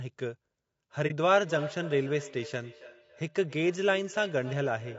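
From the start to the end, the speech has a rough, grainy texture, with a hiss-like fill between the harmonics and a top band that sounds thin and somewhat synthetic. This is likely low-delay AAC compression, the AAC-ELD type used for video calls, running at a low bitrate in the region of 32 kbps. Its short frames cannot separate closely spaced pitch harmonics well, so the coder spreads noise between them. On a spectrogram the harmonic stripes look smeared, with speckled energy filling the gaps and a blocky, flattened area at the top.

From 1.07 to 1.12 s the sound drops into a brief, soft-edged gap of about 30 ms. This is AAC frame loss with muting, and the length fits one lost frame. The decoder zeroed that frame's spectrum, and the overlapping windows faded the audio down and back up. On the waveform this shows as a short tapered pinch toward silence. On the spectrogram it is a narrow vertical blank band with softened edges.

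From 1.32 s to the end, the speech comes back as repeats roughly a third of a second apart, each thinner and more ringing, peaking at about 15 dB below the direct speech. This is feedback echo between two devices: one device plays what the other's microphone sent, and that microphone picks it up again. The spectrogram shows ghost copies of each syllable at regular offsets, losing low frequencies as they go.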